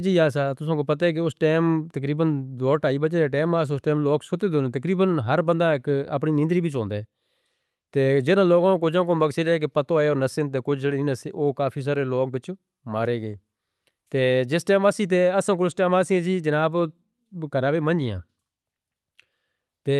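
Nothing stood out on listening to this speech, which sounds the way an ordinary call carried with Opus at 48 kbps does, its highest frequencies stopping at around 12 kHz.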